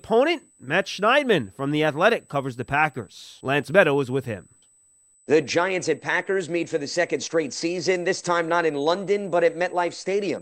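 Speech runs over a steady USB whine, a fixed tone at 8 kHz heard for the whole clip, about 35 dB below the speech. It comes from 125-microsecond USB microframes leaking through power or ground, and appears on a spectrogram as a thin, unbroken horizontal line at 8 kHz.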